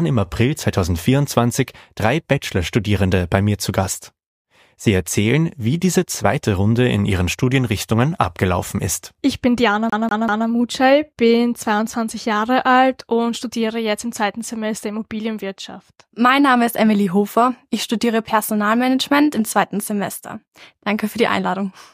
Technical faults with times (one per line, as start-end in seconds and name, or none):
9.90-10.47 CD stuck on one turn